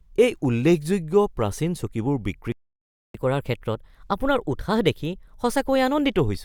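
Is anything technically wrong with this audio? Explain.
Yes. The speech has a playback stall followed by a stretch of catch-up at higher speed.

From 2.52 s to 3.14 s the audio goes silent for about 0.62 s mid-flow, then resumes where it left off. This is a playback stall, likely caused by the player running out of buffered data or its thread being blocked. Unlike a dropout or lost packet, which removes a short piece and jumps ahead, nothing is skipped. The sound simply halts and continues.

From 3.14 s to 6.14 s the speech runs at 1.1 times normal speed, with pitch raised by roughly a semitone and a half. This is catch-up at higher speed: the player resamples its backlog faster to recover the time lost in the stall, then returns to normal rate at 6.14 s. A pure pitch shift would leave the tempo unchanged, but here pacing and pitch rise together, briefly, right after the gap.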